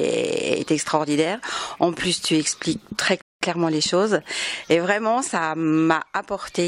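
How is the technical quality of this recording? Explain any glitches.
The recording has one audible glitch, a rebuffering stall from 3.22 to 3.41 s. Playback ran through its downloaded audio and halted until more data arrived, so the sound drops to silence and then resumes exactly where it stopped. No material is lost, but about 196 ms of dead air is inserted.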